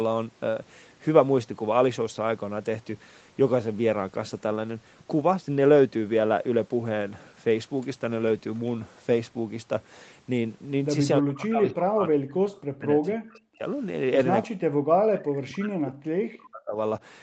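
Speech that sinks by up to about 40 dB at 11.2–12.36 s, 12.66–13.65 s and 14.44–16.78 s, likely speech suppressed in double talk. Unlike packet dropouts, it ducks unevenly in chunks rather than snapping to brief silences.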